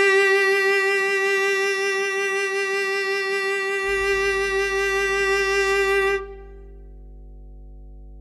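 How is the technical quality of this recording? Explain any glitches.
The music is marred by mains hum in its second half. From about 3.88 s to the end, a steady 50 Hz drone sits under everything, roughly 20 dB below the music. It's power-line energy leaking into the signal path, most likely from a ground loop or a transformer near the cabling, and it comes through as a constant low buzz that doesn't follow the music at all.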